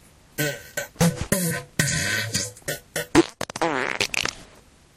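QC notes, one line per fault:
3.17–3.21 s, compressed frames skipped: the audio jumps forward by about 20 ms where one or more compressed frames were never decoded, either missing from the stream or rejected as damaged. The material on either side is butted together, so the join is either a brief smeared blip or a hard click, depending on how the codec's frames overlap. On a waveform the envelope shows a sudden discontinuity. A spectrogram shows a thin vertical seam there.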